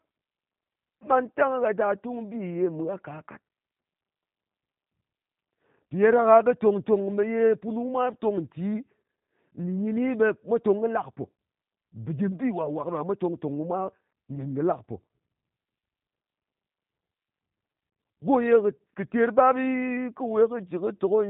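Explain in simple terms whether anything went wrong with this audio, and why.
Throughout the whole recording the speech sounds slightly rough, thin and a little synthetic, with nothing above about 3.8 kHz. That comes from the G.729 codec, a phone-call squeezer that rebuilds the voice from a simple model of the throat and pitch rather than sending the actual sound.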